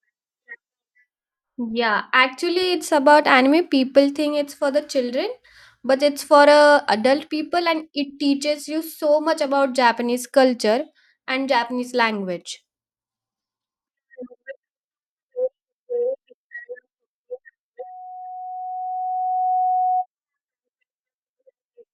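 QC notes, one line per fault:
17.79 to 20.06 s, loudspeaker feedback squeal: a steady 737 Hz tone swells up over roughly two seconds until it's about as loud as the speech. The mic's picking up its own loudspeaker, and at that frequency the loop gain tops one, so it keeps feeding itself.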